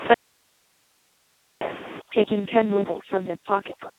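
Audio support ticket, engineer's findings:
Speex codec throughout, heavy damage. Starved CELP excitation, pointing to a bitrate near 2 kbps. Near-vocoder rendering: speech hoarse, noisy, robotic. Line band roughly 150 Hz to 3.6 kHz, nothing above 3.8 kHz.

Audio dropout to a faint residue, 0.14 to 1.61 s, about 1.47 s lost. Signal likely dropped upstream while the downstream path stayed live. Abrupt cut into hiss only, roughly 40 dB below speech level, then an abrupt return.

Overdone noise removal, 2.0 s to end. Denoiser set too aggressive against room noise sitting about 10 dB under speech. Bands near the noise estimate gated out along with quiet speech detail. Background drops and breaks into twinkling specks.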